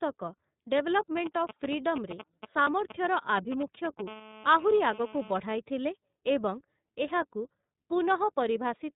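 The speech runs through the iLBC codec for its whole length. Nothing above 4 kHz survives, and each frame's excitation is coded independently, leaving a rough, slightly synthetic edge that is plainly audible. The coarse framing fits iLBC's 30 ms mode at 13.33 kbps.

From 2.64 to 2.68 s, lost iLBC frames leave a 30 ms gap. The decoder fills it by repeating the last pitch cycle mixed with noise, so it sounds like a brief held, buzzy vowel. Clean decoding resumes immediately afterwards because each frame stands alone.

From 4.08 to 5.40 s, GSM phone buzz sits under the audio. A nearby 2G handset on a call transmits in bursts about 217 times per second. The audio circuitry rectifies those pulses into a hard, raspy 217 Hz buzz with many harmonics, steady and about 17 dB below the speech.

Within that buzz, another lost frame from 5.09 to 5.13 s produces the same 30 ms held, breathy concealment before the speech snaps back.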